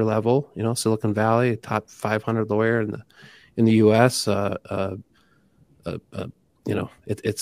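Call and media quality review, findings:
Damaged data in a compressed stream, 6.55–6.59 s, just after "uh uh". Brief garbled blip, about 40 ms. Probable component: decoder input. Corrupted bytes break the frames, so the decoder loses sync and hunts for the next valid frame header.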